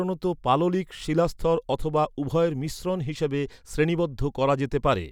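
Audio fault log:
No faults detected across the speech clip.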